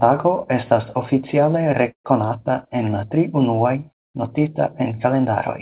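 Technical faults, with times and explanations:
1.92–2.07 s, call audio freeze: right after "tago estas oficiale" the sound stretches into a short fading fill that goes quiet for about 100 ms, then picks up exactly where it stopped with nothing lost, just about 124 ms later. Likely delayed packets draining the jitter buffer on this 4 kHz-limited G.711 call.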